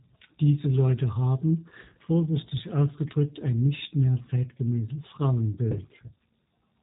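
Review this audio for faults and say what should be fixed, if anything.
The speech carries G.729 codec damage throughout, plainly audible: nothing passes above about 3.8 kHz, and the rough, slightly synthetic texture fits an 8 kbit/s encoder rebuilding each 10 ms frame from a vocal tract filter, pitch predictor and sparse pulses. To prevent it, record or transmit through a wideband codec at a higher bitrate.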